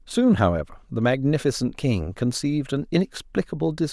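No technical faults are audible.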